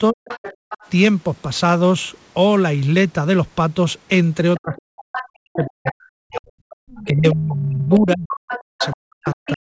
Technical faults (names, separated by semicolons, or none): speech suppressed in double talk; other side's voice leaking through; background gated by the echo canceller